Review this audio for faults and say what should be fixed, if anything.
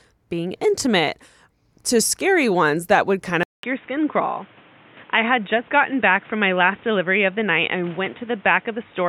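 Input switched to a poorer device at 3.43 s, just after "ones that would kind", and lasting to the end. After a 200 ms silence, the speech loses everything above 3.8 kHz and picks up a new, faint background noise about 30 dB below the speech while the overall level stays about the same, likely a lower-grade microphone or headset call profile. Lock the recording input to one device so the system cannot reroute it mid-session.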